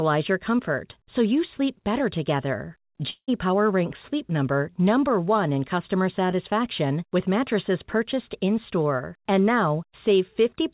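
Long network dropout, 3.1 to 3.3 s, after "you sleep better together": about 0.18 s of speech is lost, likely from lost packets, replaced by a fading buzz.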